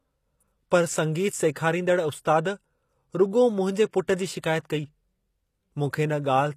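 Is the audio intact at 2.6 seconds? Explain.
No. At 2.6 seconds the speech carries the same damage heard across the whole clip, which points to HE-AAC compression at a low bitrate, likely around 24 kbps. Only the lower spectrum is coded. The treble above the crossover is synthesised by spectral band replication, copying lower bands upward under a coarse envelope. Nothing is present above about 14.9 kHz, and the rebuilt top end makes s sounds gritty, metallic or lispy.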